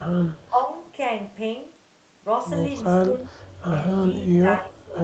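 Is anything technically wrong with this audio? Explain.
Yes, there's speech suppressed in double talk at 0.48 to 0.69 s and 4.27 to 4.97 s. The speech sags about 10 dB, then about 20 dB, likely because the echo canceller mistook it for loudspeaker echo and turned it down.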